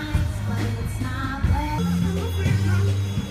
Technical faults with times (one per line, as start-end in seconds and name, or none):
1.78-3.31 wrong sample rate